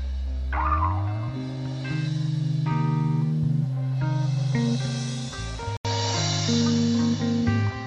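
At 5.77 s the input was likely switched to a poorer device. A gap of 80 ms is followed, through to the end, by a narrower band with nothing above 7.6 kHz, a level shift of about 5 dB, and a faint new background hiss, so the sound turns duller.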